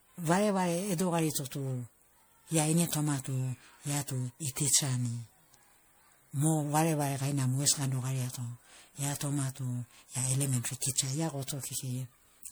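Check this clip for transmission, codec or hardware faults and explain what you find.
There's one problem, and it runs the whole way through the speech: generation loss. The sound is swirly and hollow, with smeared attacks, more degraded than a single encode at this quality should be. The likely cause is the audio being decoded and re-encoded as MP3 around seven times, at something like 96 kbit/s. Each pass quantises on a shifted frame grid, so noise and spectral holes pile up. Nothing is left above about 20.9 kHz.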